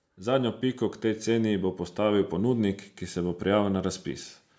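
From 0.05 to 1.33 s there's automatic gain rising: the gain control judged the input too quiet and eased it up about 4 dB, so voice and background swell together until "bo postavil ponudnik ki".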